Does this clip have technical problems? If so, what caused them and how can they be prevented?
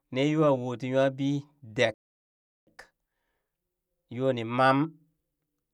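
Yes, a playback stall: the speech cuts out from 1.94 to 2.67 s, about 0.73 s of silence, likely because the player's buffer ran dry or its thread got blocked. A deeper playback buffer and keeping the audio thread free of blocking work would prevent it.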